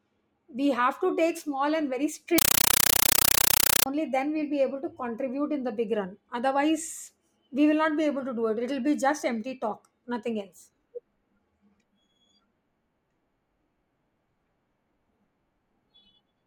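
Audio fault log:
2.38–3.86 s, compressed stream played as audio: right after "take small and very", the speech gives way to very loud, chattering static. An AC-3 stream is being treated as plain samples instead of decoded. Each 8 ms burst of data-noise followed by silent padding repeats 31.25 times a second, which fits a 384 kbps stream.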